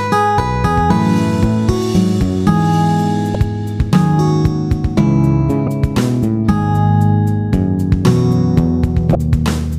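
Damaged data in a compressed stream hits three times: 3.32–3.35 s, 5.65–5.68 s and 9.12–9.15 s. Corrupted bytes make the decoder misread frames and lose sync until it finds the next frame header, and each roughly 30 ms gap is heard as a brief chirp or blip.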